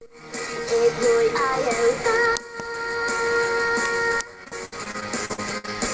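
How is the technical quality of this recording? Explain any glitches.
The recording has one clear glitch, near the end, carried over a call link whose band stops at 8 kHz, which fits G.722 at 64 kbps. From 4.44 s to 5.69 s there is repeated packet loss (robotic sound): ten separate gaps, the longest 65 ms, where audio data never arrived in time. Each hole was filled by stretching the preceding sound, about 335 ms in all, roughly 27% of that stretch. The result is a choppy, robotic stutter with pieces of the sound missing.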